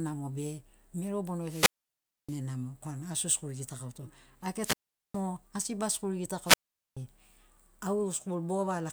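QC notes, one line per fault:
1.43 to 2.39 s, 4.53 to 5.23 s and 6.43 to 6.97 s: wireless microphone squelch dropout. Each time the speech gives way to rising hiss as the FM radio link fades, then the receiver's squelch cuts the output to near silence for about 0.63 s, 0.41 s and 0.43 s, before the speech returns. That noise build-up before the mute sets it apart from a clean digital dropout or packet loss.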